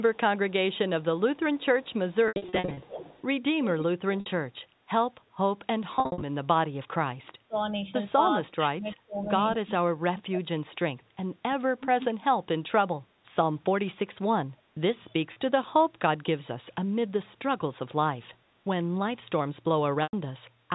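Speech carried over a G.711 mu-law call at 64 kbps, with the band ending at 4 kHz, shows three kinds of fault. The first is echo leak: the far end was likely on a loudspeaker, and its echo canceller let part of the returning signal back into the call. A copy of the speech trails about 315 ms behind the original. It is very faint, around 35 dB down, from 0.14 to 1.04 s. It is much plainer, about 15 dB below the speech, from 1.36 to 3.23 s. It is strongest, only about 10 dB down, from 11.54 to 12.07 s. The second is packet loss with pitch repetition: where packets were dropped, the receiver repeated the last pitch period to fill the gap and faded it out. From 2.28 to 2.82 s, 350 ms was lost, scattered over 540 ms with runs up to 80 ms, which fits 10 ms packets. This gives a stuttering, buzzy stretch with brief fades. The same effect occurs from 5.96 to 6.22 s, with 200 ms lost in runs up to 60 ms. 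Shorter held, buzzy patches occur at 4.20 to 4.26 s (60 ms), 15.33 to 15.36 s (30 ms) and 20.03 to 20.13 s (100 ms), the last long enough to start fading toward silence. The third is speech suppressed in double talk: with both sides talking, the echo control likely mistook the near talker for echo and pulled the level down. From 7.40 to 7.73 s the speech dips by roughly 25 dB for about a fifth of a second. From 8.32 to 10.48 s it drops repeatedly, by as much as roughly 30 dB, for about 1.5 s in all, so the speech thins and cuts out in pieces.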